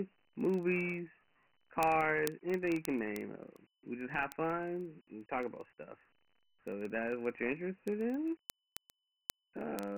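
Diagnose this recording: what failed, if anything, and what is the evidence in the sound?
The codec stage failed. The speech carries Dialogic VOX ADPCM damage for the whole clip. Nothing is heard above 3.1 kHz, and heavy gritty hiss trails the speech. The band, roughly 150 Hz to 3.4 kHz, fits 4-bit ADPCM at about 24 kbps.

The converter's digital input also failed, with word clock ticks. Sharp ticks repeat about every 40 ms from 0.14 s to 9.97 s, around two hundred in all. The receiver is not locked to the sender's clock, which is off by around 500 ppm. Each slip drops or repeats one sample.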